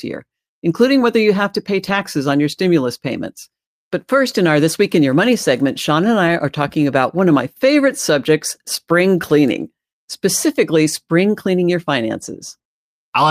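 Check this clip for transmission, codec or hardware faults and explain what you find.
Two short stretches show a lost packet rebuilt from error correction, one at 1.87 to 2.05 s and one at 6.27 s. In each case packets went missing, and the decoder played the low-bitrate backup copy carried in the following packet instead of leaving silence. The first repair spans about 100 ms of speech, which fits a run of five 20 ms packets. The second covers 20 ms, which fits one packet. Both passages stay continuous but sound briefly rougher and noisier.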